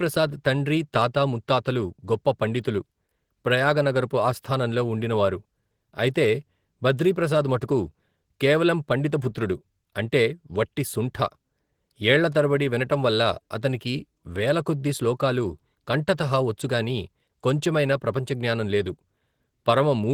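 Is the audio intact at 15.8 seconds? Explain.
No. At 15.8 seconds the speech is still under the Opus voice compression that runs through the whole clip. The encoder is in hybrid mode, with linear-prediction coding below 8 kHz and a transform layer above it, at a rate that points to around 16 kbps. At that rate the excitation is coded coarsely, so the voice comes out plainly hoarse and slightly robotic.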